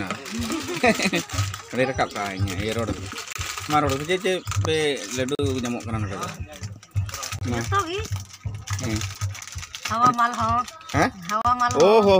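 Gaps between stream segments occur at 1.30, 3.33–3.35, 5.35–5.39, 7.39–7.42, 9.41 and 11.42–11.45 s. These are hard-edged silent holes of about 6 to 39 ms, recurring every 2 s. Timestamp mismatches at the boundaries of 2-second segments leave gaps that the player fills with silence.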